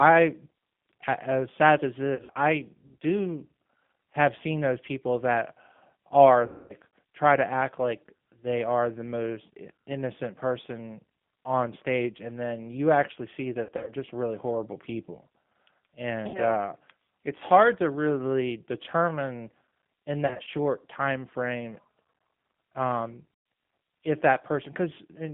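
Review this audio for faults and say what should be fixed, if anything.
The speech carries plainly audible G.729 codec damage: it is band-limited to roughly 150 Hz to 3.5 kHz and sounds rough and synthetic, which fits an 8 kbit/s G.729A link. Prevent this by negotiating a wideband codec such as G.722 or Opus for the call.

VoIP packet loss concealed by the speech codec occurs at 2.15–2.33, 6.46–6.74, 13.63–13.92, 16.28–16.40, 20.27–20.49 and 23.34–23.46 s. At each point the decoder repeats its last pitch and filter, so the sound becomes a buzzy tone or coloured noise that fades. The worst gap, at 6.46 s, covers about 240 ms. Prevent this with a more stable network path, QoS priority for voice traffic and forward error correction or redundancy in the media stream.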